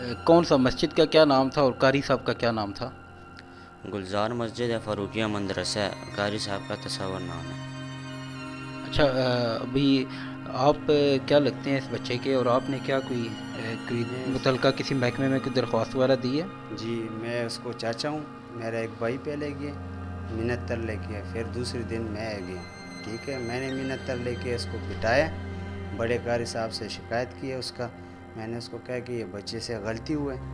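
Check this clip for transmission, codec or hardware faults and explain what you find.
Nothing in the signal points to a transmission, codec or hardware fault: the audio runs without interruption throughout.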